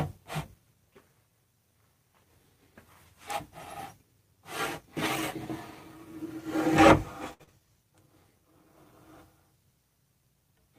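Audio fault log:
7.33–7.42 s, short stall from a late packet: a packet arrived behind schedule and the jitter buffer drained, so the receiver held the last sound for about 62 ms until the data caught up, then carried on where it had stopped. Nothing is lost, but that moment is stretched, with a faint buzz or dip, and everything afterwards lands about 62 ms later than before.
7.44–7.61 s, short concealed packet loss: moments later, about 40 ms of audio never reached the decoder in time. The receiver covered part of the gap with about 35 ms of synthesised continuation, modelled on the preceding sound, before blending back into the real signal. Overall this stretch comes out roughly 15 ms longer, and it is heard as a brief smear or wobble where a short detail can drop out entirely.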